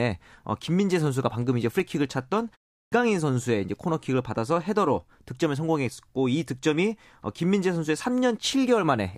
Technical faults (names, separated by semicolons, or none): clipped start after a pause